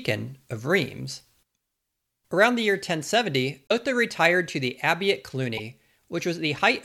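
Corrupt frames were decoded: damaged compressed data was played as if valid, putting energy at wrong frequencies. At 3.67–3.72 s, just before "retired to the abbey", a loud blip peaks near -10 dBFS. At 5.57–5.60 s, after "to the abbey at", a quieter burst of about a couple of frames follows.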